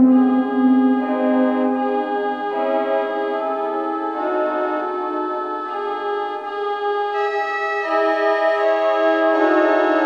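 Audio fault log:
No technical fault can be heard anywhere in the recording.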